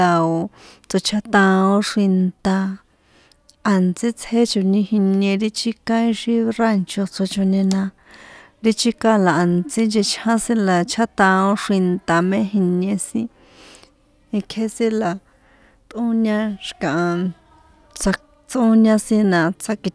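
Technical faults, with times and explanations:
No technical faults can be heard anywhere in this speech recording. Nothing in it calls for a time or an explanation.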